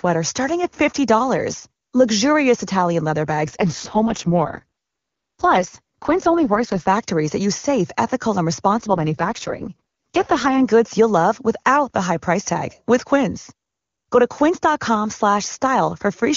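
AMR rate drops occur from 3.46 to 6.88 s, ending just before "that use safe ethical", and again from 8.78 to 10.65 s, just after "use safe ethical and". In both stretches the speech turns rough and synthetic with no gap and no loss of band, which fits the wideband codec being pushed from 23.85 down to 6.6 kbit/s, its lowest rate, to spend bits on error protection over a weak radio link. Clarity returns once the rate climbs back.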